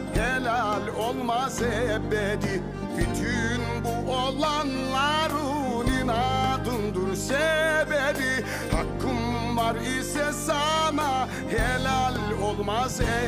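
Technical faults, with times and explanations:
No technical faults can be heard anywhere in the clip. Nothing in the sound calls for a timed note or an explanation.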